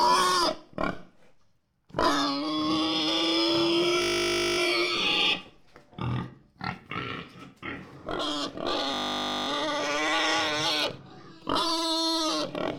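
At 4.02 s the sound locks into a system hang loop. The driver or host stalls while the audio hardware keeps replaying one 20 ms slice of its ring buffer, which fits a 20 ms buffer. Until 4.58 s that slice repeats exactly, producing a steady 50 Hz buzz instead of the programme. The same fault returns from 8.94 s to 9.48 s with the identical 20 ms loop and 50 Hz buzz. In both cases, playback resumes with essentially no audio skipped.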